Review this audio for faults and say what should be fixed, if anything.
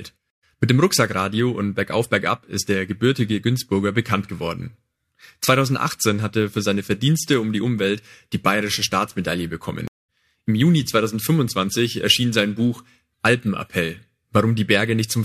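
Two stream reconnect dropouts: a 121 ms gap from 0.30 to 0.44 s and a 210 ms gap from 9.88 to 10.10 s. Each time the connection broke, the player restarted its decoder mid-stream, and the audio comes back roughly 150 ms further on, so that bit is simply lost. A bigger receive buffer plus seamless reconnect logic would hide these.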